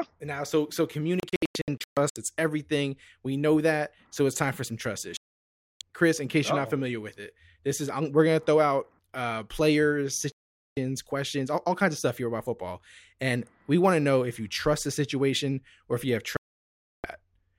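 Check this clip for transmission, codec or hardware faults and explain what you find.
Digital broadcast dropouts break this speech four times. From 1.20 to 2.17 s the receiver loses sync in scattered bursts, muting about 0.51 s in total across 0.96 s, with the longest hole 128 ms. Solid mutes follow at 5.17 to 5.81 s (0.64 s), 10.32 to 10.77 s (0.45 s) and 16.37 to 17.05 s (0.67 s). Frames fail their checksum and the decoder silences output until clean frames return, so speech cuts abruptly and resumes further on, with the missing stretch gone. The gap lengths suggest frames of about 32 ms.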